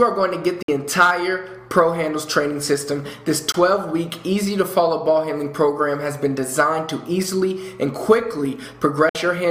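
Audio packets likely arrived too late at the headphones and were discarded, a Bluetooth dropout: the sound cuts to silence at 0.63 to 0.68 s, 3.52 to 3.54 s and 9.09 to 9.15 s, then resumes further along, skipping about 56 ms, 19 ms and 56 ms.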